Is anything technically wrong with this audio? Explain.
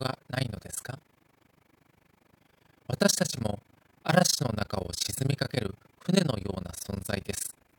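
Yes. Throughout the clip, the sound has a harsh, fast flutter, a rough tremolo around 30 times a second that chops the level by about 60 dB on each cycle. This is overlap-add ripple: windowed frames were rejoined with overlaps that fail to sum to constant gain, so loudness dips once per frame.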